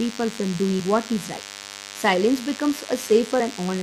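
It's a short speech clip with a thin, steady DECT cordless phone buzz underneath it the whole way through: a 100 Hz burst rate rich in harmonics, sitting roughly 15 dB below the voice, from a nearby handset or base being rectified. There are also two quick glitches from damaged data in a compressed stream, at 0.79 s just before "what is right" and at 3.39 s, where the decoder lost sync.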